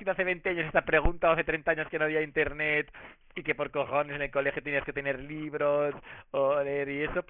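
Speech with aliasing throughout. Energy above 3 kHz folds back into false, gritty tones. This fits a rate reduction to about 6 kHz without an anti-alias filter.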